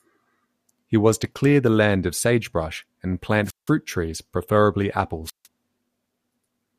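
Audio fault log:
3.44–3.71 s and 5.24–5.47 s, wireless microphone squelch dropout: the radio link from the analogue FM microphone weakens, so hiss swells briefly before the receiver's squelch mutes its output. The first dropout comes after "land of sagebrush and" and the second after "trees preferably", with holes of about 0.17 s and 0.15 s. On a spectrogram, each shows a short haze of broadband noise, then a near-empty vertical strip. On the waveform, the trace goes flat before the signal returns.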